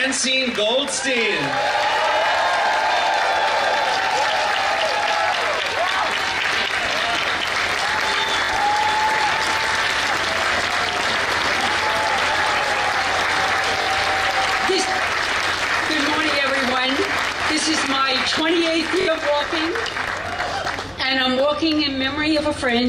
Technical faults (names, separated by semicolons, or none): Bluetooth stutter